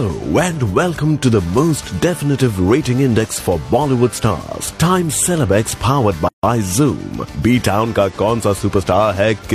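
A gap at a join of encoded pieces opens at 6.28 s and runs to 6.43 s, a silence of about 151 ms cutting into otherwise continuous sound before it resumes exactly where it left off. The edges are smeared by the codec. The audio was encoded in separate sections and butted together untrimmed, so the start-up delay of one encoder run and the padded final frame of the previous one both remain at the seam.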